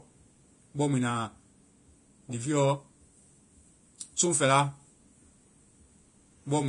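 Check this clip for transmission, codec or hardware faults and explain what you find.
There is one fault, present throughout the speech: Vorbis compression, likely at a low bitrate around 31 kbps. Nothing remains above 10.6 kHz. The treble is quantised so coarsely that fine detail turns to noise. The voice sounds hissy and grainy, with blurred consonant attacks.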